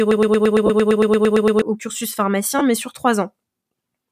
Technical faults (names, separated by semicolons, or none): broken-record loop; lost LE Audio frames